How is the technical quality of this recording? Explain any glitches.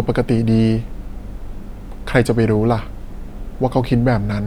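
No audible glitches or faults.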